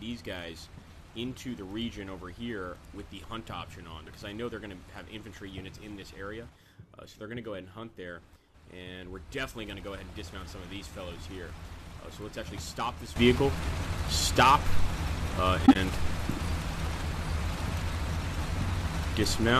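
From 4.07 to 4.10 s, a corrupt frame was decoded: damaged bits in roughly one compressed frame were played anyway, misplacing energy across frequencies and producing a brief burst of error around -35 dBFS.

At 13.16 s, a sudden gain jump, likely a digital gain step applied without a ramp, lifts the sound and its background noise together by about 12 dB until the end.

From 15.66 to 15.76 s, a corrupt frame was concealed: the decoder detected damaged AAC data and covered it over about 0.1 s, which fits four frames.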